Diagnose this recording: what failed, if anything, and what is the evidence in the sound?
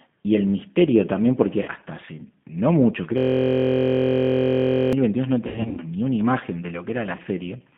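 G.729 codec, throughout: the speech sits in a telephone band of roughly 150 Hz to 3.5 kHz, with nothing above it, and has the rough, slightly synthetic grain of plainly audible codec damage. The stage is the codec. At 8 kbit/s, G.729A does not carry the waveform. It rebuilds each 10 ms frame from a vocal tract filter, a pitch predictor and a few pulses, so fine detail is replaced by a modelled approximation.

VoIP packet loss concealed by the speech codec, at 1.63–1.68 s, 5.47–5.81 s and 7.16–7.22 s: the network stage dropped audio, and the decoder filled each gap from its last pitch and filter state. The first and last events each cover about 30 ms, which fits a single lost packet. The middle event loses about 210 ms scattered over 300 ms, with the longest gap about 90 ms. There the sound smears into a fading buzzy tone or coloured noise and stays weak while the decoder state recovers.

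System hang loop, 3.18–4.93 s: a 23.22 ms fragment repeats exactly, about 75 times, producing a steady buzz at 43.1 Hz instead of speech. The failure is at the driver or buffer stage. The host stopped supplying audio while the hardware kept replaying the same ring buffer, and the loop length fits a 1024-sample buffer.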